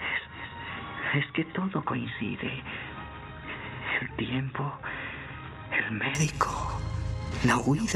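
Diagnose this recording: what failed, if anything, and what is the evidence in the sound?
Input likely switched to a poorer device at the driver stage: until 6.15 s, nothing above 3.8 kHz, about 5 dB quieter, faint added noise.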